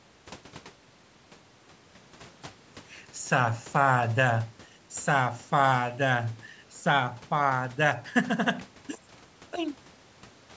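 Nothing goes wrong anywhere in this speech; the only thing you'll notice is the usual call microphone processing, which trims the deepest bass and leaves nothing above 8 kHz.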